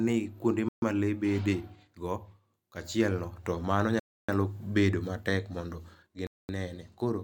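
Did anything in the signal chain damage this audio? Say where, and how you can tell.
Yes. This is likely a Bluetooth stall on the wireless playback link: the headphone buffer ran dry. The speech cuts to silence at 0.69–0.82 s, at 4.00–4.29 s before "bedo matek mondo", and at 6.27–6.49 s after "bedo matek mondo", then resumes each time.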